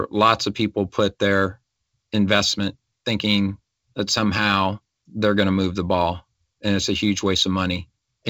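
Throughout the speech, the converter's sample clock wanders by roughly a microsecond. This sample clock jitter adds a faint hiss, about 40 dB down, that roughens louder, brighter passages below the G.722 band edge near 7.8 kHz.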